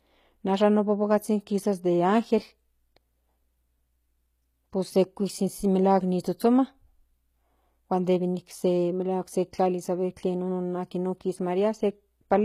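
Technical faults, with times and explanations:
Throughout, HE-AAC compression: the speech has a bright but synthetic-sounding top end, with s sounds coming out gritty and lispy. The likely cause is a codec that codes only the lower spectrum and rebuilds the treble by copying lower bands upward, which fits a low bitrate around 20 kbps. On a spectrogram, the upper band shows repeated, smeared copies of lower harmonics that do not line up across the crossover, and nothing appears above 14.9 kHz.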